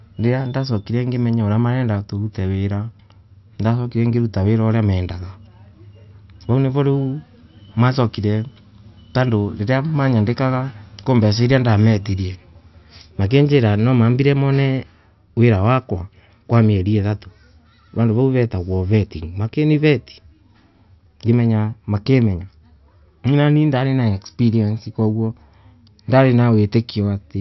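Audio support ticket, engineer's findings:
No audible faults found in this speech recording.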